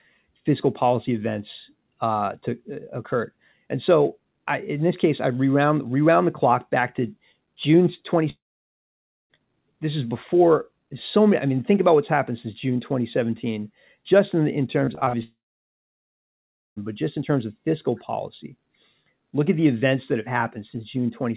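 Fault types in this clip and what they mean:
Long network dropout: At 8.3 to 9.31 s and again at 15.23 to 16.78 s the sound stops outright. A brief fading continuation of the last sound gives way to silence, about 0.92 s the first time and 1.41 s the second. The sound then resumes later with that stretch simply gone, about 1 s and 1.54 s respectively. This is most likely a long network outage in which no audio reached the receiver.
Repeated packet loss (robotic sound): From 14.85 to 15.15 s, just before the second dropout, the sound turns choppy. Five short holes, the longest 46 ms, follow one another closely. Each is patched by stretching the preceding sound, so about 39% of that span is filler rather than real audio, roughly 0.12 s lost in total. The rapid alternation of patches and fragments gives it a choppy quality with pieces missing.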